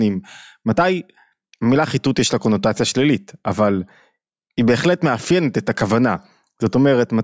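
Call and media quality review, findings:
Nothing to flag on this speech recording; it all sounds as it should, with no problems turning up anywhere along the way.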